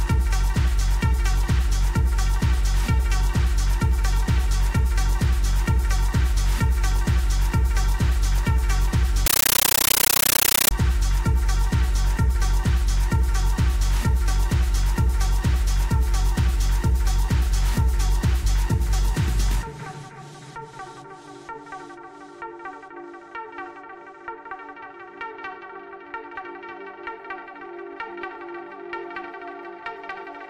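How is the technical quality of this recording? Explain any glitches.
There's one real glitch. From 9.26 to 10.71 s you get a compressed stream played as audio: undecoded data, likely AC-3, coming through as 13.3 ms noise bursts 31.25 times a second, so loud chattering static.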